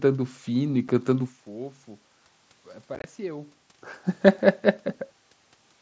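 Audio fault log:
0.88 s, unconcealed Bluetooth headset packet loss: a single 7.5 ms hole with hard edges. The missing audio was never filled in or smoothed, so it is an abrupt gap and not a fade.
2.95–3.04 s, unconcealed Bluetooth headset packet loss: about 52.5 ms of gaps scattered over 90 ms, the longest run 22.5 ms. This sounds like a rough, chopped crackle with abrupt cuts, not like the level dipping as a talker moves.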